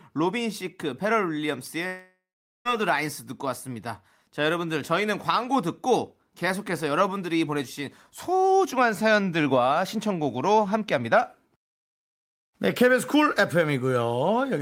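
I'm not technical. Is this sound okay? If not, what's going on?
No, there's one problem. From about 1.87 to 2.68 seconds the speech cuts out in what's called a long network dropout, likely from the connection stalling. Right as it goes, the last bit of sound gets stretched into a fading buzzy hiss, then there's roughly half a second of silence. When the speech picks back up, about 0.78 seconds of it is simply gone and never gets replayed.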